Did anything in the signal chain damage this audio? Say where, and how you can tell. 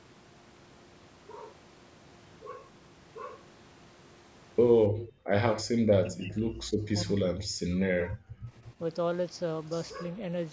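Yes, and it all happens in the call processing stage. The clearest damage is speech suppressed in double talk: the speech dips at 4.88–5.10 s (about 15 dB) and at 5.74–5.85 s (about 10 dB), then drops much harder at 6.01–6.62 s and 6.89–8.31 s, by roughly 35 to 40 dB. Those later stretches sound close to cut out. The likely cause is an echo canceller that couldn't tell this talker from its own loudspeaker echo, so it turned everything down.

There's also an echo leak at 4.95–5.09 s, right in that first dip. You can hear a faint delayed copy of the speech, about 15 dB under the main signal and trailing it by 279 ms. That's likely the loudspeaker side's echo canceller missing part of what its microphone picked up from the loudspeaker and sending it back down the line. The top end stops at 8 kHz, which is just the call path's bandwidth and not a fault.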